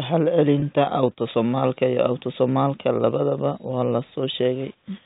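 At 0.60 to 0.62 s, just before "autosomalka iyo", the speech has a packet loss with pitch repetition. About 20 ms of audio went missing, which points to a single lost packet. The receiver filled the gap by looping the last pitch period, so instead of a silent hole or a click there is a brief, slightly buzzy hold on the preceding sound before the speech resumes. The surrounding audio keeps the 4 kHz ceiling of G.711 telephone coding.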